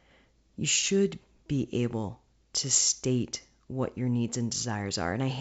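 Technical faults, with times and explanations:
No technical faults can be heard in this speech clip. It carries G.722 wideband telephone coding at 64 kbit/s, which keeps the speech band up to about 7 kHz and leaves at most a faint trace of its coding in the upper band.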